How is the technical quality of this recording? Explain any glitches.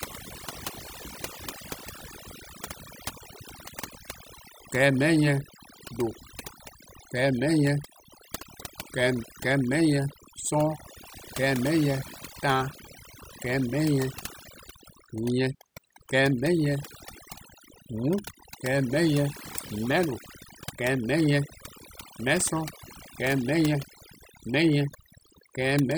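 The quality suffers from overdone noise removal throughout. Bands near the estimated noise are cut away, so the background drops to twinkling near-silence and quiet parts of the speech are lost with it.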